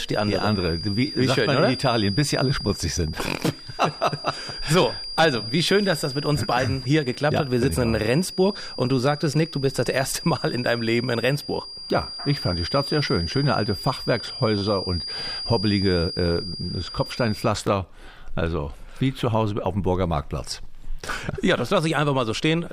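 From the start until about 17.56 s, a thin, steady whistle sits behind the sound. It is a feedback whistle at 4.8 kHz, roughly 10 dB below the main signal. Its level swells and fades slowly. The likely cause is a loudspeaker-to-microphone loop held just at the edge of feedback. One frequency keeps ringing without building up, and it stops at 17.56 s.

At 1.07 to 1.09 s there is a repeated buffer. The device ran short of fresh audio and played the same tiny slice again, with a hard join at each repeat. The slice sounds about 10 ms long, which fits a 10 ms buffer. At that size it comes across as a brief buzz rather than a clear stutter. Nothing seems to be skipped afterwards.

The same fault returns at 14.58 to 14.62 s. This one is longer, with more repeats. A last, single-repeat click follows at 17.67 s, just after the whistle ends.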